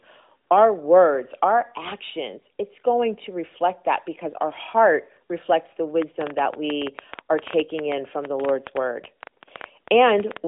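A train of clicks runs from 6.02 s to 10.38 s in this speech recording, which reaches the ear through a narrowband mobile line that cuts everything above 3.8 kHz. Around forty similar pops arrive at roughly 8 per second but on an uneven pace, peaking about 10 dB above the speech, so they tick through both talk and pauses. The likely cause is electrical interference from nearby equipment or a faltering interface injecting repeated pulses.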